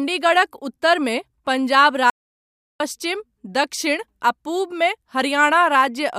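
Speech with one audio dropout to silence. From 2.1 to 2.8 s, about 0.7 s, sound vanishes completely, room tone included. A lost input signal is the likely cause.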